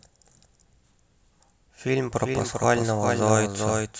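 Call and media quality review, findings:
Doubled audio track, present throughout. Likely cause: second capture of the same speech via a slower path, mixed back in alongside the direct feed. Effect: full-band copy trailing by around 400 ms, a few dB (roughly 5) below the original. Dry, no decay or room colour, so it reads as a detached second voice repeating each phrase rather than reverb.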